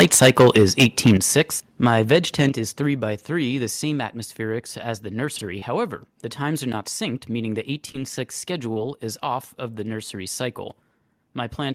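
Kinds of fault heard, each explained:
Microphone overload: From 0.00 to 1.41 s, and again from 1.86 to 2.46 s, the speech peaks are flattened into a harsh crackle. The likely cause is an input driven into the converter's ceiling, about 12 dB over at first and about 2 dB later.
Microphone volume stepped down: At 0.02, 1.17 and 2.49 s the whole level drops abruptly, by about 3, 8 and 6 dB. The likely cause is call software cutting the device's input gain in a single step.
Chunks out of order: Between 5.36 and 5.41 s a 23 ms block of audio plays one position late, after the block that should follow it. Nothing is lost, but three hard joins produce a brief jumbled moment.
Short concealed packet loss: At 5.59, 7.92 and 8.74 s about 20 ms of audio never arrived in time. The receiver bridged each gap by extending the preceding sound for 17 to 24 ms, leaving a short smear or wobble before the real signal resumes.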